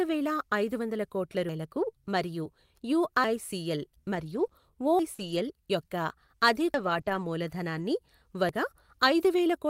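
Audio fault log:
1.49, 3.24, 4.99, 6.74 and 8.49 s: audio missing between chunks. The recording path likely handles audio in blocks and drops a slice each time it closes one and opens the next. The skips recur about every 1.75 s, which fits a two-second chunk cycle with material lost at each seam. Roughly 300 ms vanishes at each join, and the two sides butt together with no silence. Sound jumps forward abruptly and can lose part of a syllable.
1.90 to 1.96 s: short concealed packet loss. Forty milliseconds of audio failed to reach the decoder in time. The receiver extended the preceding sound across the hole, keeping its pitch where it was voiced and using shaped noise where it was not, then crossfaded back into the real signal. Because 40 ms of rebuilt material stands in for the original, this spot comes across as a brief smear or wobble.
4.15 to 7.83 s: scattered short gaps. Across this stretch about three packets were lost or arrived late, spread out rather than in a cluster. 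Together they account for 80 ms of missing audio, and the longest single hole is around 40 ms. Each was patched by continuing the last sound, so only about 2 percent of the span is synthetic. What remains audible is a few isolated hiccups or small smears.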